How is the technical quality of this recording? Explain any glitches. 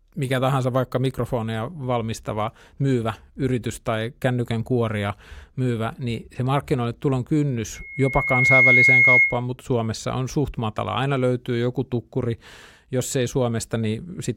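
One glitch affects the speech. Loudspeaker feedback squeal, 7.75 to 9.43 s, just after "niin se markkinoille tulon": the microphone picks up its own loudspeaker and the loop runs away at 2.2 kHz. The tone swells within about a second to roughly 10 dB above the speech.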